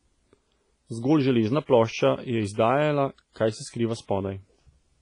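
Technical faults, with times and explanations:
Throughout, WMA compression: the speech rings and sounds washy, with hiss that breathes with the voice and nothing above 10.5 kHz. Likely heavy WMA coding, fitting 24 kbps, whose long transform blocks smear quantisation noise over tens of milliseconds and zero weak components.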